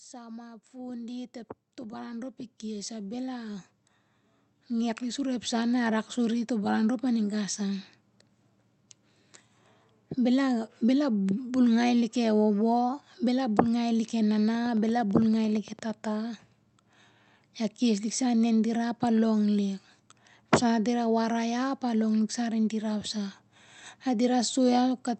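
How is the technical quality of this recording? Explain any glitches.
There are two clear glitches: a slow level swell near the start and a burst of clicking about halfway through. The audio has also come through a call path, and it sounds like Opus at around 48 kbps, with nothing above roughly 8 kHz and a layer of coding noise throughout.

From 0.71 to 5.79 s, just after "sa ma ep" and running up to "rak suri to' baran", there's automatic gain rising. The gain control decided the input was too quiet and kept nudging it up, about 16 dB in total over those five seconds. Because it's a single gain on the whole signal, the speech and the background noise swell together rather than the voice alone getting louder.

From 14.55 to 15.91 s, right after "ngai lik e", there's a train of clicks. You get around fifteen near-identical ticks at a steady 8.9 per second, each about as loud as the speech, and they carry on through the gaps too. 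That regular, same-shaped pattern points to something outside the sound itself, likely electrical interference or an interface hiccuping, injecting a pulse on a fixed schedule.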